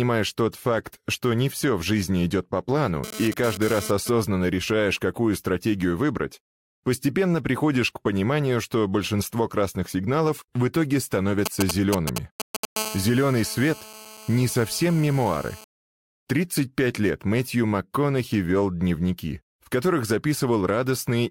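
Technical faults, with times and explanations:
3.04 to 4.09 s: GSM phone buzz. A harsh, raspy buzz sits about 12 dB below the signal, repeating at 216.7 Hz and thick with harmonics. A nearby 2G handset doing a data transfer pulses its transmitter, and the audio circuit rectifies those radio bursts into sound.
11.46 to 12.65 s: GSM signalling bursts. A galloping dit-dit-dit of short 216.7 Hz buzzes, roughly as loud as the signal. The phone sends brief clusters of radio bursts while signalling, and each cluster is rectified into its own audible burst.
12.76 to 15.64 s: GSM phone buzz. A steady raspy buzz at 216.7 Hz, about 15 dB below the signal. With the handset now in a call it transmits its bursts steadily, so the rectified pulse train holds a constant tone with no relation to the audio.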